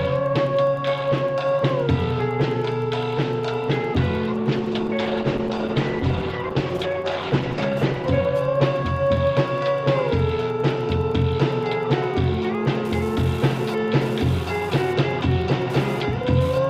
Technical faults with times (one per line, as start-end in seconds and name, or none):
0.00-16.70 Wi-Fi interference
4.34-9.23 call bitrate drop